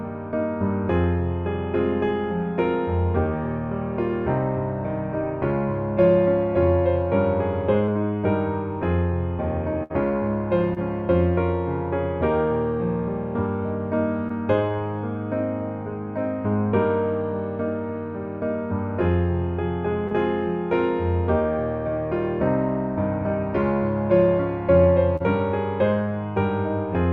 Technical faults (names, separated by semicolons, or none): short concealed packet loss; burst of packet loss